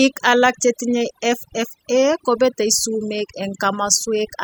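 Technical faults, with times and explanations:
Throughout, overdone noise removal: the noise reduction was set far too aggressively, so any frequency band sitting close to the estimated noise floor is pulled down hard or gated off entirely. Between phrases the background drops and breaks up into scattered twinkling specks where isolated bands flicker on and off. Quieter components of the speech fall below that threshold too and vanish with the noise.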